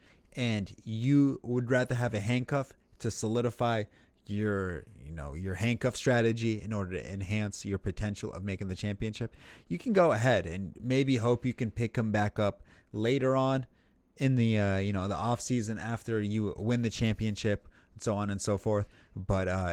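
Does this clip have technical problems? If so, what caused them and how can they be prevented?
No, there are no technical problems in this speech clip. The Opus voice compression keeps the full audio band, which fits a hybrid mode at around 20 kbps, and its effect on the sound is light.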